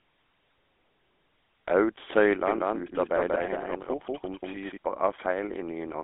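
Throughout, GSM full-rate codec damage gives the speech a buzzy, gravelly roughness from pulse-driven vocal-tract modelling. This grit, not just the 250 Hz to 3.5 kHz band with nothing above 3.8 kHz, separates it from plain telephone filtering.

From 2.47 to 4.77 s, a doubled audio track appears: a dry copy, roughly as loud, trails by about a fifth of a second and cuts in and out abruptly. It is likely from a second capture path, and its lack of decay sets it apart from room echo.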